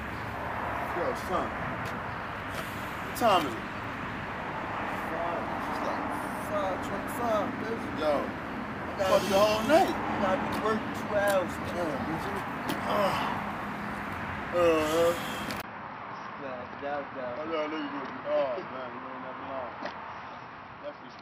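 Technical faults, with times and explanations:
15.62 to 21.21 s, input switched to a poorer device: after a 20 ms gap, the sound turns dull and narrow, with nothing above 5.8 kHz. It drops about 5 dB and gains a faint new background noise. The recording input likely changed to a lesser microphone.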